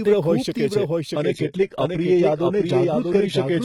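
Speech runs throughout with a dry, flat second copy trailing roughly 0.7 s behind, a few dB quieter and without any room decay. This doubled audio track is likely the same audio captured twice, once through a slower path, or two copies left out of step in an edit. From 1.14 s to the end the sound turns abruptly duller, with nothing above 11.8 kHz and rising codec artefacts. That sudden, gapless change points to an adaptive stream at a lower bitrate, which fits a switch from 96 kbit/s AAC-LC down to 16 kbit/s HE-AAC.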